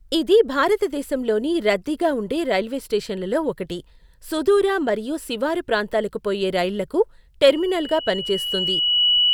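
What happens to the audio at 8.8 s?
At 8.8 s a loudspeaker feedback squeal is sounding. It begins at 7.49 s and runs to the end of the clip. A microphone is picking up the loudspeaker it drives, and at one frequency the loop gain passes one. That frequency keeps feeding itself. Here it is a steady tone near 2.9 kHz. It swells over about a second and a half and ends up a few decibels louder than the speech.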